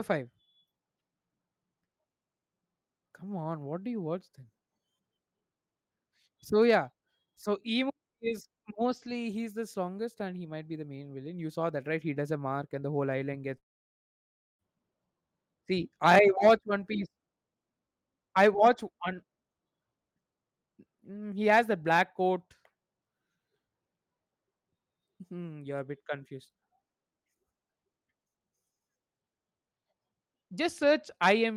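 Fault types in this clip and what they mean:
Long network dropout: from 13.57 to 14.62 s the speech stops, a brief fading buzz continues the last sound, then roughly 0.98 s of silence follows; speech resumes with about 1.02 s missing, likely from packets lost in transit.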